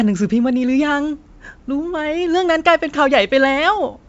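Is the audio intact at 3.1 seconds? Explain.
Yes, the speech at 3.1 seconds is intact, with no fault there beyond the wideband G.722 telephone coding at 64 kbit/s, whose effect at this moment is faint at most.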